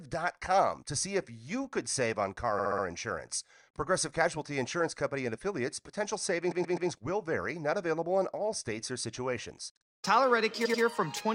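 Repeated frames, where compressed frames were replayed, cause stutters at 2.58 s (64 ms block, four extra plays), 6.51 s (128 ms, three) and 10.64 s (85 ms, two). The waveform shows identical copied segments.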